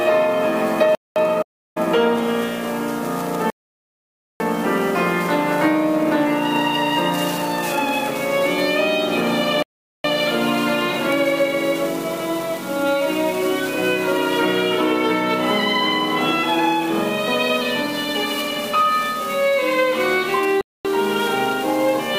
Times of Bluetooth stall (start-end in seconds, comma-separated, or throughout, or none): 0.95-1.16, 3.50-4.40, 9.62-10.04, 20.61-20.85